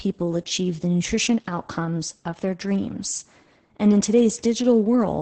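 From start to finish the speech sounds muffled, hoarse and faintly robotic, with nothing audible above about 8.7 kHz. This is heavy Opus voice compression. The narrowed band and coarse, buzzy texture point to the codec's SILK linear-prediction mode at a wideband setting. It modelled the vocal tract and sent only a rough version of the excitation signal, which fits a very low bitrate of around 10 kbps.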